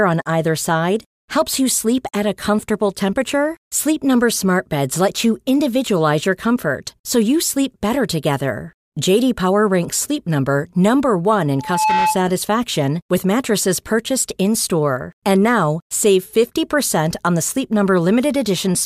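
From 11.58 to 12.23 s there's loudspeaker feedback squeal, the mic looping its own speaker, an 864 Hz tone swelling quickly to about speech level.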